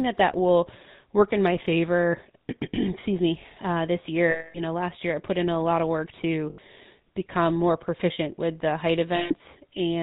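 Throughout, the speech passes through the GSM full-rate codec, consistent with its 13 kbps rate: a vocal-tract model driven by coarse pulse excitation, with nothing kept above 4 kHz. The result is a dull, band-limited sound with a plainly audible buzzy, gravelly roughness.

Lost GSM frames then occur at 4.30 to 4.59 s (240 ms, just before "know last year I"), 6.50 to 6.59 s (80 ms, between "lot of work to" and "become more proficient with"), and 9.16 to 9.33 s (140 ms, after "proficient with the height"). Each gap is bridged by repeating the last good frame, heard as a brief rough, metallic ring.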